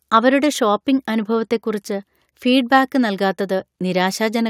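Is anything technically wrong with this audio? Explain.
No, nothing stood out as technically wrong when listening to this speech recording.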